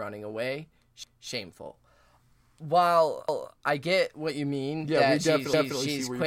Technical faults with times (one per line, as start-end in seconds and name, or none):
1.03-1.28 overlapping chunks
3.28-3.53 overlapping chunks
5.53-5.78 overlapping chunks